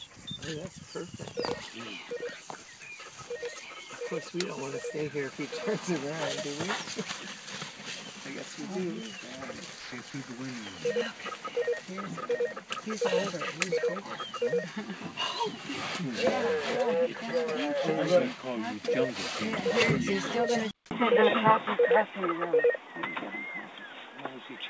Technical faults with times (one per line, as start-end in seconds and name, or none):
9.80-10.14 sound dropped by the voice detector
20.71-24.70 input switched to a poorer device